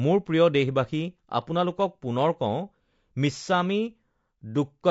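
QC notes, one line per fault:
throughout, low-delay AAC compression: The speech has likely passed through AAC-ELD, the low-latency codec of video calling. The damage is plainly audible, which fits a bitrate around 32 kbps. To keep delay down, the encoder codes about 500 frequency lines a frame with a low-delay window, and at this bitrate it has few bits to spend on each. That makes the voice sound rough and grainy, with the coding errors heard as noise between the harmonics.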